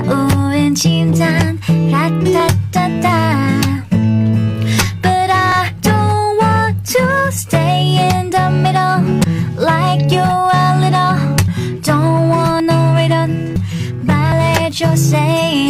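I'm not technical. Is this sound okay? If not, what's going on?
No, there are seven small skips at 2.4, 5.52, 9.24, 11.48, 12.6, 13.56 and 14.32 s. At each, the sound jumps ahead, losing a sliver to about a tenth of a second, most likely a dropped buffer (overrun), where the recorder lost chunks before saving them.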